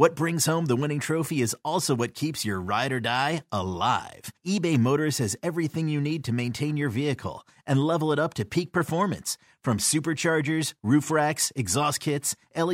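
No audible technical faults.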